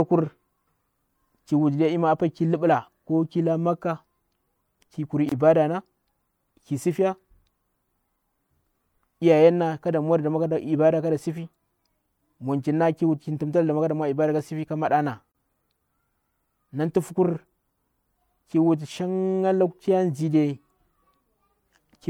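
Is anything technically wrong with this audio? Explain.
Yes. The speech has a gap at a join of encoded pieces twice, from 5.29 to 5.32 s (about 24 ms) and from 15.32 to 15.35 s (about 32 ms), 10 s apart. Separately encoded pieces were joined without trimming the encoder's start-up delay and end-of-piece padding, so silence sits between them. The result is a brief dropout, then the speech resumes where it stopped. On a waveform or spectrogram it appears as a thin blank vertical strip with slightly smeared edges.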